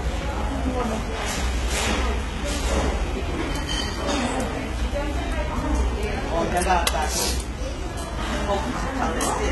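A clip of sounds with HE-AAC compression damage running the whole way through, and it's heavy. Nothing gets above 11.8 kHz, and the top end that is there sounds synthetic: gritty and metallic, because the treble has likely been rebuilt by copying lower bands upward rather than coded directly, so its detail doesn't line up with the real content underneath. The damage level fits a very low bitrate, around 16 kbps.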